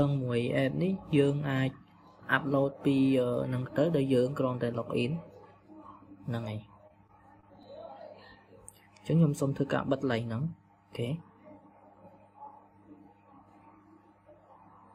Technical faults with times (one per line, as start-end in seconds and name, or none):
6.87-7.67 repeated packet loss (robotic sound)